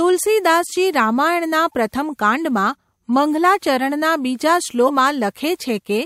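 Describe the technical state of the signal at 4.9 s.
Around 4.86 to 4.91 s the decoder skips whole compressed frames. The jump fits roughly three frames of about 43 ms, and roughly 150 ms of speech is lost. The speech jumps ahead at the join.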